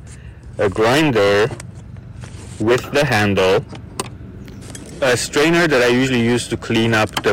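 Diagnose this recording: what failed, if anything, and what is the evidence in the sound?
Hard clipping throughout, at the converter or the gain stage feeding it. Overdriven by about 17 dB, roughly one sample in seven is cut flat. The waveform shows flat plateaus, and the spectrogram shows harmonics smeared far upward, heard as harsh fuzz on every loud sound.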